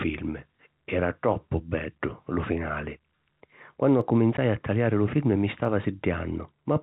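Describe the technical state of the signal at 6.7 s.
At 6.7 s the speech is intact, carried through G.711 telephone coding that limits it to the band below 4 kHz and leaves at most a faint quantisation noise following its level.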